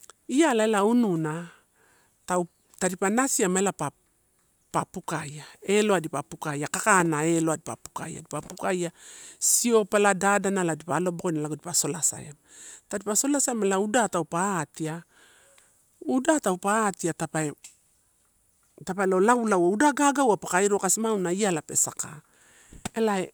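No technical faults can be heard at any point in the recording.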